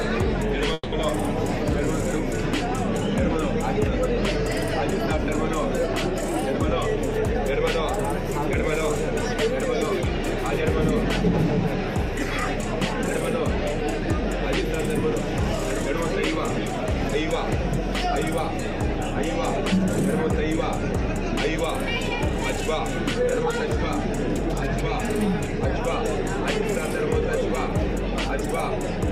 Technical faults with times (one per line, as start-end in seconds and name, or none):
0.73-0.95 call audio freeze
22.19-28.52 jitter buffer speed-up